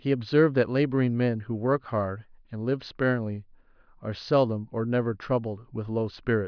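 No technical faults can be heard anywhere in the speech.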